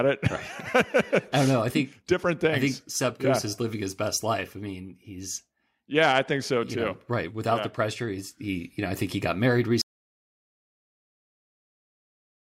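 Speech that stops dead at 9.81 s, right after "think he got married", and never returns. This is an audio dropout to silence. From that point to the end the signal is silent. No room tone or background hiss remains. The likely cause is a lost input, such as a disconnected device, a failed link or a mute, while recording carried on. Whatever followed in those final 2.6 seconds is gone.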